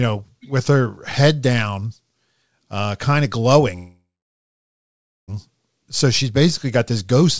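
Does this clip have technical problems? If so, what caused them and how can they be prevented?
Yes. A call audio freeze runs from 3.76 to 5.30 s. The last sound trails off as a fading buzz or hiss into about 1.2 s of silence. Then speech resumes where it stopped, so the gap adds delay without losing anything. The likely cause is late packets draining the jitter buffer. A more stable network path or a larger adaptive jitter buffer would prevent it.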